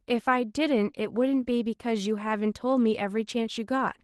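Opus voice compression is audible throughout the speech, with hybrid coding at a rate near 16 kbps. Coarsely coded excitation makes it plainly hoarse and slightly robotic.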